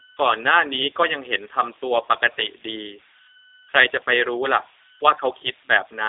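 Converter idle tones run through the whole speech clip. A delta-sigma converter without dither, fed a very small input, locks into repeating bit patterns, producing a whistle around 1.5 kHz in pauses and a grainy layer under quiet passages, about 25 dB below the signal.

G.729 codec damage is also present throughout and plainly audible. The speech is rebuilt from a filter, a pitch predictor and a few pulses per subframe, which fits 8 kbit/s G.729A. The line band runs about 300 to 3700 Hz, with nothing above 3.8 kHz, leaving speech rough, slightly synthetic and dull.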